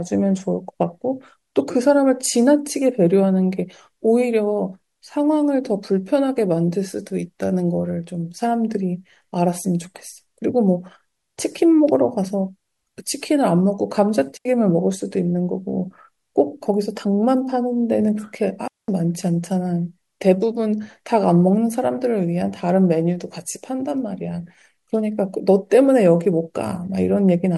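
At 14.37 s and again at 18.68 s the speech drops into clean near silence, for about 82 ms and then 206 ms: a digital wireless dropout, where the receiver lost too much data and muted with a very short fade. The waveform shows a flat gap and the spectrogram a blank column, with no noise burst either side.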